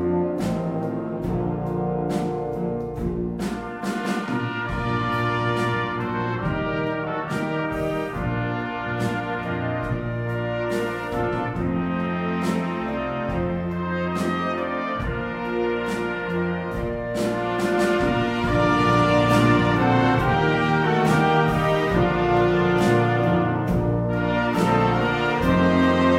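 No technical faults are audible anywhere in the clip.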